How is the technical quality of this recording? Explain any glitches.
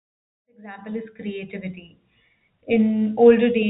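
The technical quality of this recording shows no glitches to explain.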